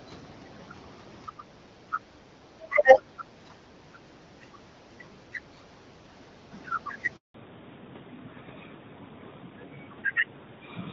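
From 1.29 to 1.43 s, 2.51 to 3.26 s and 5.3 to 5.67 s the speech dips by roughly 10, 20 and 15 dB, likely speech suppressed in double talk by an echo canceller. At 7.16 s a handover gap silences the speech for 180 ms until 7.34 s, losing whatever was said while the call switched networks. From 7.34 s to the end, a fallback to narrowband leaves nothing above 4 kHz, so the speech turns duller and rougher than the earlier HD Voice sound, which fits a drop from AMR-WB to AMR-NB.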